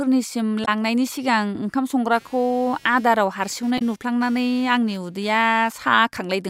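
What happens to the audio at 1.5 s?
Nothing goes wrong at 1.5 s: the speech there is intact, with no dropout, click, glitch or other fault in the sound.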